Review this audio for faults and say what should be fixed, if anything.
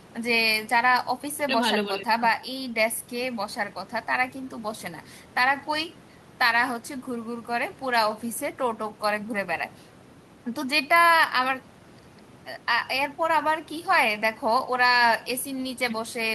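No faults found in the speech; nothing to fix.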